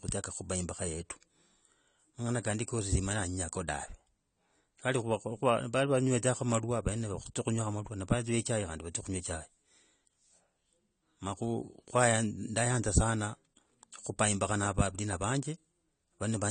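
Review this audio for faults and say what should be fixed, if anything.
The speech runs the whole way through with nothing above 9 kHz, so it sounds dull and a bit smeared, with a fizzy, warbling edge on sibilants and held sounds. That's most likely AAC compression: the encoder cut the top of the spectrum and quantised what's left coarsely against a hearing model, and the damage level fits a low-bitrate AAC-LC encode, somewhere around 32 kbps. To avoid it, keep an uncompressed or high-bitrate master and encode at a higher rate.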